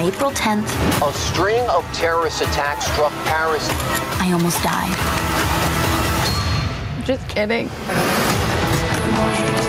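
Throughout the clip, a breathing, pumping motion swings the level by something like 10 dB. Loud and quiet passages sit unnaturally close together, and the whole sound feels squashed. This is gain pumping, likely caused by the input gain being set far too high, so a fast limiter or compressor keeps clamping down on each peak and releasing between them.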